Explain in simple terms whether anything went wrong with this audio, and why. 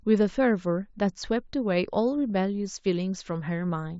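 Concealed Bluetooth headset packet loss happens twice, at 2.30 s and again at 3.69 s. Each time, a tiny slice of sound, about 7.5 milliseconds and most likely a single packet, went missing between the headset and the phone. The phone covered the gap by repeating the closest-matching bit of the sound it had just received, so each dropout passes as a brief, nearly hidden hiccup rather than a silence. Around it, the mSBC headset codec adds only a light graininess.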